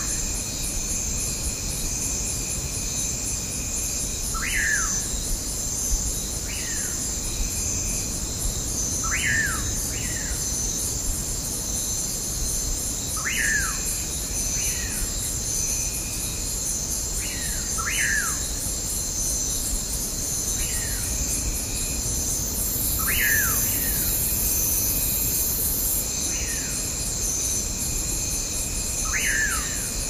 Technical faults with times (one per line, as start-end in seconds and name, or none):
none